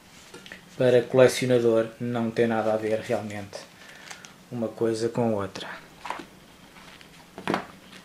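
Nothing stood out on listening; no technical fault could be heard at any point in the audio.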